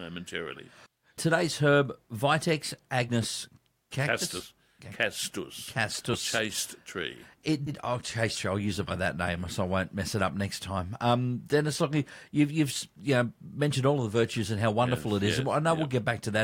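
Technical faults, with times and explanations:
4.40–4.43 s, 6.13–6.17 s and 7.66–7.71 s, compressed frames skipped: the speech jumps ahead, losing roughly 150, 70 and 100 ms. Whole frames were missing or rejected as damaged. The jumps fit 10 ms frames.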